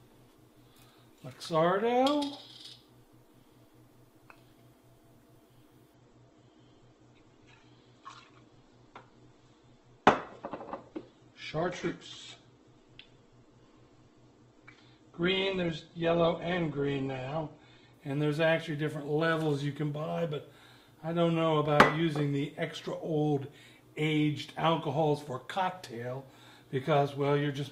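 From 5.94 s to 17.94 s the audio switches abruptly, without a gap, to an adaptive stream at a lower bitrate. Everything above 8.1 kHz vanishes and codec artefacts rise, fitting a low-rate Opus stream. A spectrogram shows the top band sliced off, while the waveform stays continuous.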